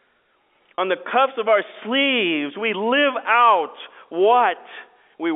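At 0.76 s one stretch of data failed to reach the receiver, which bridged the hole by repeating the last pitch period of the speech, a packet loss with pitch repetition. The concealed section runs to about 0.78 s, and the gap points to a single lost packet of about 30 ms. It is heard as a brief, slightly held, buzzy sustain before normal speech resumes, all within the G.711 telephone band of about 250 Hz to 3.5 kHz.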